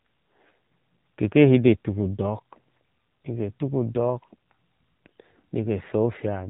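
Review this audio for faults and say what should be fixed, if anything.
The whole clip has been through the AMR narrowband mobile codec: the speech is cut off above 4 kHz and has that buzzy, synthetic edge of a low-rate mode, which fits AMR-NB at about 7.4 kbps. To fix it, capture or transfer over a wideband path, or use a higher-rate codec.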